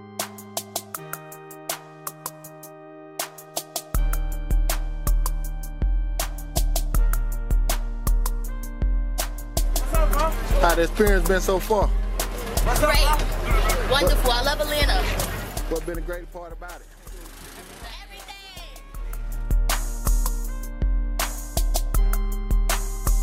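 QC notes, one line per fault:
18.84–19.42 s, zipper noise: level shifts about 20 dB in unsmoothed 2 dB jumps, roughly twenty a second, each step clicking, so it zips.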